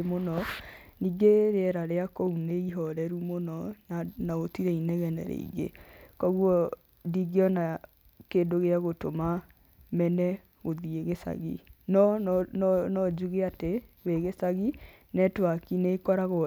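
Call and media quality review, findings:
Nothing to flag on this speech recording; no problems turned up anywhere in it, so no ticket needed.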